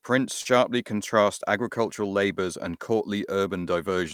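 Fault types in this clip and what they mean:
short concealed packet loss: just before "contrast agricultural labours and", 40 ms of speech never arrived and was filled by extending earlier sound, which shows on a spectrogram as briefly smeared, repeated sound.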